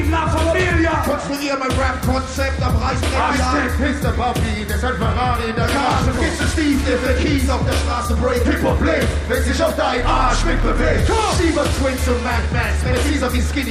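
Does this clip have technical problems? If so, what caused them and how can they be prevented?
Yes. At 6.17 to 6.19 s there is a skip ahead: playback jumps forward with no filler, and roughly 0.7 s of audio is missing, with the two sides joined almost directly. A stretch was lost, either in transit or discarded by the jitter buffer on overflow, while later audio was already queued, so the output delay drops by about the same amount. Prevention: size the jitter buffer for the network's burst behaviour and use packet-loss concealment rather than discarding queued audio.

From 8.15 to 9.15 s a jitter buffer speed-up runs the audio at 103% speed with the pitch unchanged. The buffer held more audio than its target, and the receiver shortened it by removing many short pitch-period-sized pieces in succession, about 40 ms in total over that second. Prevention: stabilise packet delivery so delayed packets do not arrive in clumps, and let the buffer drain its excess more gradually.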